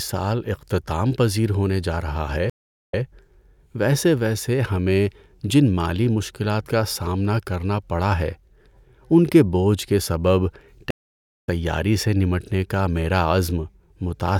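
At 2.50–3.02 s and 10.91–11.48 s the speech shows a stream reconnect: the connection dropped and playback restarted on a fresh decoder. The first gap is 416 ms of silence, with audio resuming 0.10 s earlier, so a short stretch repeats. The second gap is 554 ms, and the speech resumes roughly half a second later, skipping material.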